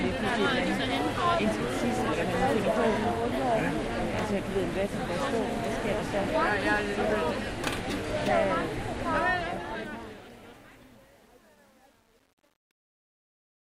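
From 9.15 s to the end at 13.65 s, truncation distortion on a fade: as the sound fades out from around 9 s, the level stage drops bits without dither, which fits a 9-bit path. From 9.81 s the tail turns gritty and steppy.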